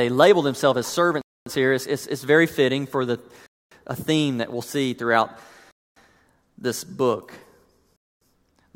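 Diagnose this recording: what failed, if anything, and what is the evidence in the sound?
Chunked playback likely inserts a 250 ms gap between 2 s chunks, at 1.21, 3.46, 5.71 and 7.96 s, such as after "label themselves as".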